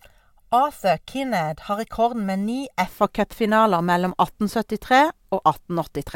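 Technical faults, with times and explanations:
0.00–2.87 s, channel delay (comb filtering): one channel arrives around 1.5 ms late, and when the two are summed to mono the shared speech cancels at evenly spaced frequencies, starting near 300 Hz. Those fixed notches make the speech sound hollow and phasey.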